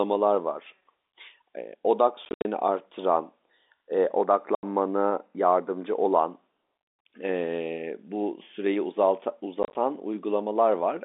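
At 2.25–2.45 s, 4.55–4.63 s and 9.63–9.75 s, packet loss filled with silence chops the speech into hard-edged gaps in steps that fit 10 ms packets, unlike concealment, which would smear or repeat sound instead of going dead.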